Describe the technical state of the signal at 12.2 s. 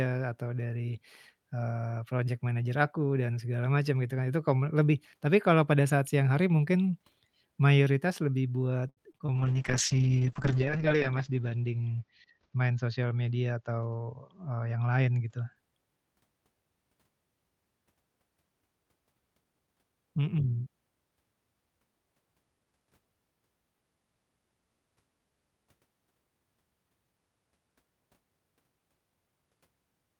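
Call bitrate drop, 9.36 to 15.62 s: the encoder, starved of bits, codes coarsely and cuts highs above 8 kHz, leaving speech rough and muffled.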